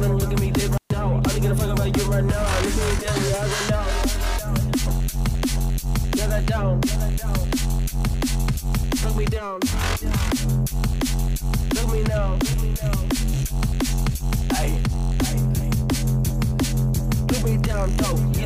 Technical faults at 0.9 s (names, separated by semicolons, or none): intermittent contact